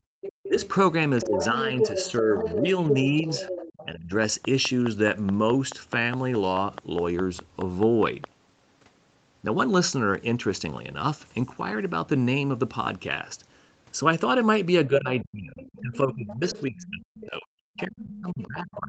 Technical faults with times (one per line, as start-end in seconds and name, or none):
0.00-0.19 background gated by the echo canceller
0.21-3.86 other side's voice leaking through
0.47-0.61 speech suppressed in double talk
1.25-4.13 speech suppressed in double talk
14.87-18.89 speech suppressed in double talk
15.18-17.85 other side's voice leaking through
18.42-18.76 other side's voice leaking through